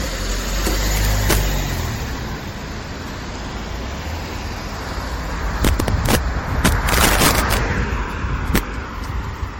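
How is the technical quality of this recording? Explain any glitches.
The recording has serious technical problems: a persistent smeared, hollow coding texture and several bursts of harsh digital cracking.

Generation loss runs through the whole clip. The sound is swirly and hollow, attacks are blurred, and nothing is present above 16.5 kHz. The likely cause is repeated MP3 encoding, around seven passes at a rate that fits 64 kbit/s, each pass adding fresh quantisation noise on a shifted frame grid.

Integer overflow occurs from 0.67 to 1.37 s, 5.65 to 6.15 s, 6.65 to 7.57 s and 8.56 to 8.58 s. Loud peaks exceeded the integer range by about 5, 6, 7 and 2 dB respectively and wrapped to the opposite sign instead of being limited. The result is violent cracks, far sharper than clipping.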